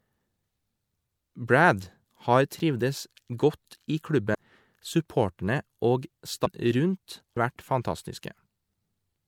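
Compressed frames were skipped at 0.42, 4.33, 6.45 and 7.36 s. The speech jumps ahead about 300, 200, 300 and 300 ms.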